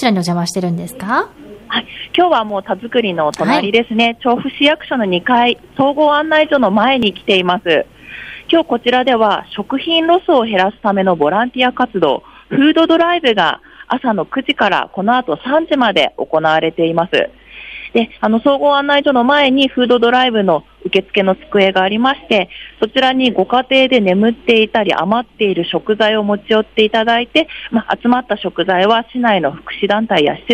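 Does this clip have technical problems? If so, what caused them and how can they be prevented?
Yes: a jump in the sound at 2.50 s and 7.03 s, likely dropped buffers (overrun), each skipping roughly 10 to 15 ms without the silent gap a dropout leaves. Reading the input promptly, with larger buffers or higher capture-thread priority, prevents this.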